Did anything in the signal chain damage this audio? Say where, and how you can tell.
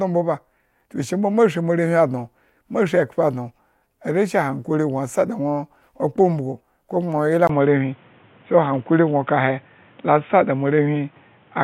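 Yes. An input switched to a poorer device at 7.47 s, at the input device and driver stage, and the rest of the speech stays that way to the end. A gap of about 20 ms marks the switch. After it, nothing reaches above 3.8 kHz, so the sound turns dull and boxy. The level shifts by about 5 dB, and a different noise floor appears about 35 dB below the signal. The likely cause is the recording system changing to another microphone or a headset's narrowband call profile.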